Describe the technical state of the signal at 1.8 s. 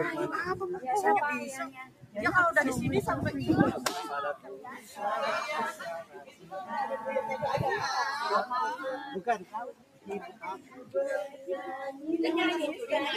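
At 1.8 s, the sound sits inside a dip from 1.67 to 2.17 s. This is sound cut by the noise suppressor. It mistook this material for noise and pulled it down by about 14 dB. Sustained parts sink and decays shorten. Sharp onsets survive better.

The dip sits within a wider fault: a noise suppressor applied to music or sounds across the whole clip. Built for speech, it treats steady tones and tails as noise. Its gain swings by roughly 15 dB, so the sound pumps and thins.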